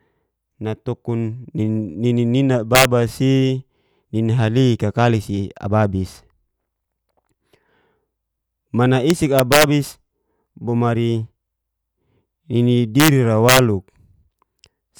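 Integer overflow cracks hit the speech at 2.75–2.85, 9.10–9.64, 13.00–13.08 and 13.49–13.59 s. Loud peaks pushed about 1 to 3 dB past the integer limit and, unclamped, wrapped to the opposite extreme, giving violent snaps harsher than ordinary clipping.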